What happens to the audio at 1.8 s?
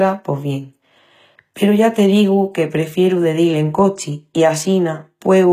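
At 1.8 s the speech carries the same damage heard across the whole clip, likely HE-AAC compression. The upper spectrum sounds bright but synthetic, with nothing above about 14.9 kHz. Only the lower bands seem truly coded. The treble is rebuilt by copying those bands upward under a coarse envelope. Its harmonics don't line up with the real ones, so s sounds turn gritty and metallic. The damage is plainly audible, which fits a low bitrate near 20 kbps.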